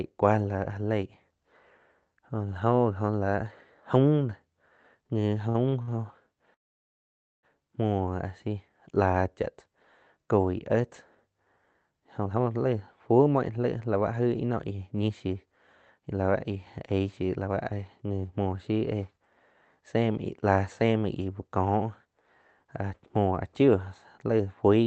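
Three short stalls from late packets come close together, at 5.49–5.57 s, 5.69–5.74 s and 5.82–5.91 s. Each time the jitter buffer ran dry, and the receiver stretched the last sound by roughly 37 to 52 ms before resuming at the same point. Nothing is lost, but the sound briefly hangs with a faint buzz or dip.

At 6.54–7.45 s comes a call audio freeze. The sound trails off into about 870 ms of silence and then picks up where it stopped. The likely cause is packets held up in transit, emptying the buffer, which adds close to 0.9 s of delay.

Jitter buffer speed-up follows from 12.18 to 21.21 s. The audio plays at 111% speed while the receiver trims many tiny pitch-period slices, about a second in all. Pitch is unchanged but delivery sounds hurried. A milder pass at 107% runs from 22.64 to 23.69 s and removes about 70 ms. All of this is heard through Opus with an 8 kHz bandwidth.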